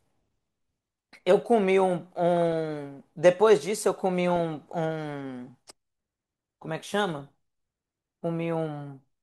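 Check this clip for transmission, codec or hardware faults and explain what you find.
Three short bursts of DAB burbling occur, at 2.37 to 2.53 s, 4.30 to 4.40 s and 7.19 to 7.29 s. Weak reception let bit errors slip past the error correction into the MP2 audio data, at a rate of a few tenths of a percent, highest in the last burst. Corrupted samples put short blips of noise into single sub-bands, and corrupted scale factors make sub-bands jump in level for up to a frame, heard as burbling over the speech.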